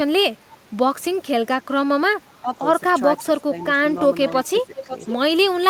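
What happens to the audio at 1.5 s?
Nothing goes wrong at 1.5 s; the speech plays straight through that moment without any dropout, glitch or distortion.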